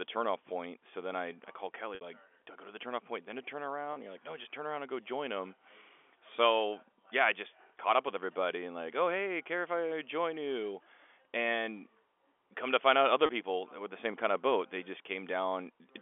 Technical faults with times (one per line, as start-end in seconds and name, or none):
1.95-2.01 packet loss with pitch repetition
3.93-3.96 packet loss with pitch repetition
13.26-13.29 packet loss with pitch repetition